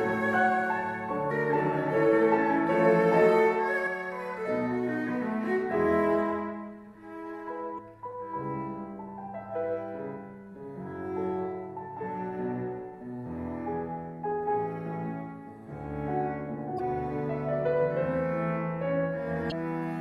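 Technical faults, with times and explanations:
1.27–1.31 s, 3.83–3.87 s, 7.75–7.79 s, 16.76–16.80 s and 19.48–19.52 s: damaged data in a compressed stream. Each event is a brief disruption of about 44 ms where the compressed data was corrupted. The decoder could not interpret the frames there correctly, lost sync and had to search for the next valid frame header. The result is a short burst of garbled output or a gap in the audio.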